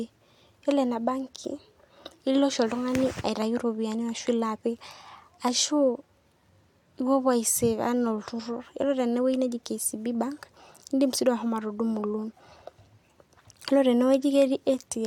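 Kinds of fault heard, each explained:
No technical faults detected.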